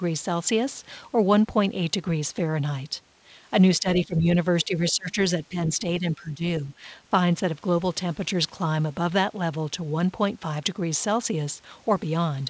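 Between 3.8 and 4.27 s the speech dips by about 10 dB, then sinks harder, about 15 dB, from 4.65 to 5.17 s. It's speech suppressed in double talk: both ends were talking at once, and the echo canceller, likely unable to tell the local talker from loudspeaker echo, pulled everything down. Further short dips come at 5.49 to 5.56 s (about 10 dB) and 6.0 to 6.43 s (about 15 dB), so the talker comes through pumping.

Inside that second dip, at 4.89 to 4.93 s, there's a brief scrap of the other side's voice leaking through, about 20 dB under the speech. That's residual loudspeaker sound the echo canceller likely failed to remove from the mic. It's just a 40 ms flicker, faint. The band tops out at 8 kHz throughout, which fits a G.722 call path at 64 kbps.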